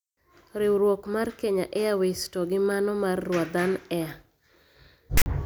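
Speech clip where file tags played as audio appear from 5.17 to 5.26 s: text bytes make a harsh rasp offset to one side, then zero padding goes silent. The waveform shows a shifted block then a flat line, and the spectrogram shows a hard-edged broadband slab.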